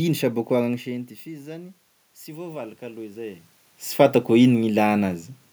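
From 2.25 to 3.51 s, automatic gain rises: the input fell about 16 dB and the control slowly adds about 5 dB. Speech and room noise swell together, visible as a ramping waveform envelope and a brightening spectrogram noise floor.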